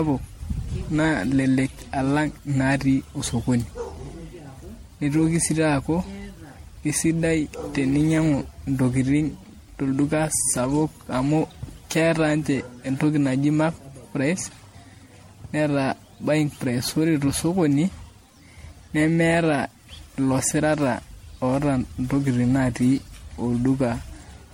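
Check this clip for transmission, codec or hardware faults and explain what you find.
Throughout the speech there is one codec fault, generation loss. The sound is swirly and hollow, with a watery smear on sustained sounds, blurred consonant onsets, and nothing above 16.5 kHz. The damage is heavier than a single MP3 pass would leave, even one at 64 kbit/s, which the bandwidth fits. The likely cause is repeated decoding and re-encoding, around ten times. Each pass requantises on a shifted frame grid, so noise and spectral gaps accumulate.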